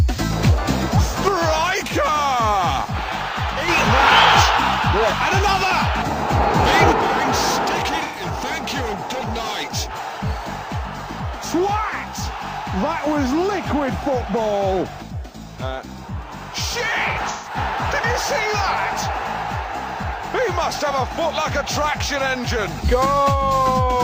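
From 1.28 to 3.68 s, and again from 6.92 s to the end, the level falls abruptly by about 6 dB. That's likely one channel dropping out before the mono sum. From 8.03 to 8.23 s there's AAC frame loss with concealment: about 128 ms is filled in from the last good spectrum, giving a smeared, phasey patch. It happens again from 17.12 to 17.57 s, this time 213 ms lost in scattered bits, with the longest run around 150 ms.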